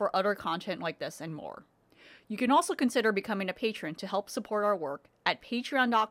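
A clock-matching stage in the playback chain likely made a drift correction step on this speech clip, slowing the playback rate by about 5.8% at once to rebalance its buffer. From 1.28 s, just after "other content like this", the voice drags and drops about a semitone, roughly 103 cents flat. At 2.88 s, before "becoming a patron to", speed and pitch snap back to normal.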